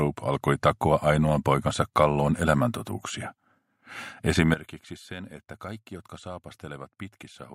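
At 4.54 s the level drops abruptly by about 16 dB and stays down to the end of the clip, with the sound and its background noise falling together in a single step rather than fading. This is a sudden gain jump. The likely cause is a digital gain change applied from one sample to the next with no ramp, such as a level setting or bit shift switched instantly, which scales everything in the signal at once.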